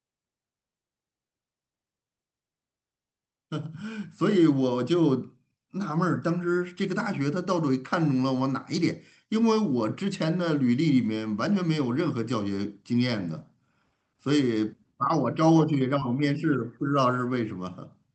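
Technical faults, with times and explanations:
16.00 s, short concealed packet loss: About 10 ms of the call reached the decoder too late to be played. The receiver covered the gap by extending the preceding sound, using its pitch if voiced and shaped noise if not, then crossfaded back into the real signal. The patch is only a few milliseconds long, so it registers as a brief smear or wobble. The call path's audio tops out at 8 kHz, which fits Opus.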